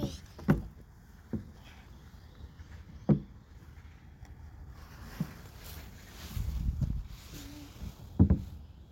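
No technical faults can be heard anywhere in the recording, and the signal stays steady and intact throughout.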